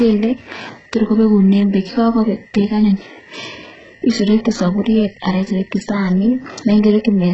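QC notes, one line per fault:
Throughout, HE-AAC compression: speech sounds gritty, with nothing above 8 kHz, and s sounds come out lispy and metallic. Likely a heavily squeezed HE-AAC encode, around 8 kbps, rebuilding the treble from copied lower bands instead of actually coding it.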